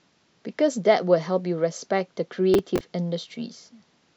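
From 2.54 to 2.81 s the speech carries a short burst of processor overload crackle. Several audio buffers of roughly 5 ms each miss their deadlines, and each gap is filled with stale audio whose hard edges come through as gritty tearing until the load eases.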